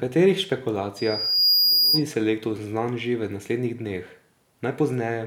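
Loudspeaker feedback squeal from 0.96 to 2.04 s: the microphone re-amplifies its own loudspeaker, so a 4.9 kHz tone swells over about half a second to a few decibels above the speech.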